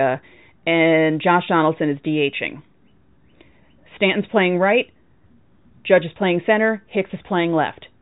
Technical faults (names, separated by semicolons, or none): none